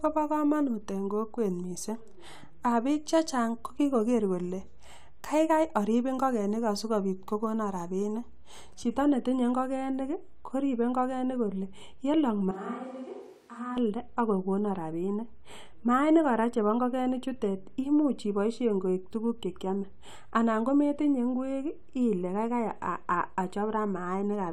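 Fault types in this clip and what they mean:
Switch to a distant microphone: from 12.51 to 13.77 s the speech abruptly turns roomy, hollow and thin in the bass, about 10 dB quieter, with room noise about 30 dB below it; likely the close microphone dropped out and a farther one took over.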